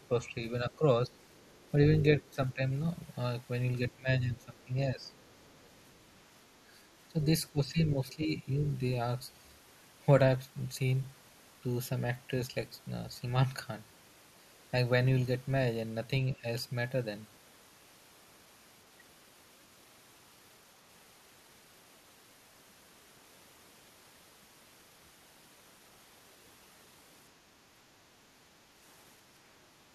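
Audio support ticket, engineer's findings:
Speech suppressed in double talk at 0.0–1.13, 2.2–2.62, 3.91–5.12, 7.12–7.2, 7.52–8.49 and 16.36–16.44 s. Speech dips, by roughly 10–15 dB at worst, in short chopped pieces. Waveform shows notched envelope. Likely echo canceller ducking the near-end talker while the far end was active.

Other side's voice leaking through at 1.21–1.71 and 5.04–6.2 s. A faint second voice sits far below the talker, roughly 35–40 dB down. Spectrogram shows weak harmonic traces in gaps; barely visible on the waveform. Likely residual loudspeaker echo not fully removed from the microphone.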